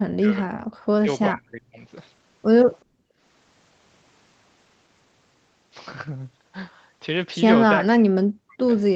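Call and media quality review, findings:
Speech suppressed in double talk at 0.19–0.49, 1.01–1.09, 1.29–1.79 and 7.81–8.71 s: voice dips up to about 40 dB, likely the echo canceller attenuating near-end during far-end activity. Waveform shows envelope notches; spectrogram shows energy holes.

Background gated by the echo canceller, 2.85–3.19 s: room tone drops about 19 dB while the loudspeaker plays, then recovers. Waveform shows a dip in level; spectrogram shows a dimmer band-wide stripe.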